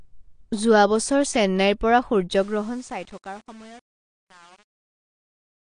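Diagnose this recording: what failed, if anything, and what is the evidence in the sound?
Codec stage. The whole clip sounds dull and smeared, with nothing above 9.8 kHz. This is likely AAC compression at a low bitrate, around 32 kbps.

Sample-format stage. From 2.30 s, after "যোৱা বছৰ চেন্নাইৰ পৰা", the fade shows truncation distortion. The undithered waveform breaks into coarse steps, which points to about 7-bit resolution.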